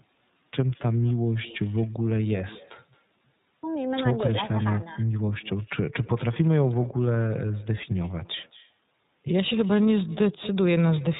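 Speech runs through a line where the far end's loudspeaker feeds its microphone and no echo canceller removes it, so across the whole clip every phrase returns around a fifth of a second later, about 22 dB down, as a faint, thin shadow trailing the talker. The audio was also coded with the iLBC codec, which handles each frame's excitation independently and passes nothing above 4 kHz; the damage is plainly audible as a muffled, slightly rough and synthetic edge, and the texture fits the 30 ms, 13.33 kbps mode.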